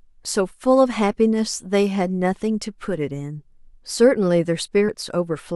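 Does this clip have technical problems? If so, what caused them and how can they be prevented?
Yes. Compressed frames are skipped at 2.53 s and 4.88 s. The speech jumps forward instead of pausing: about 20 ms vanishes at the first point, roughly one codec frame, and about a tenth of a second at the second, which points to several frames lost together. Each join is a jump ahead rather than the silent hole of a dropout. Preventing this means protecting the encoded stream with checksums, error correction or retransmission so damaged frames are repaired before decoding.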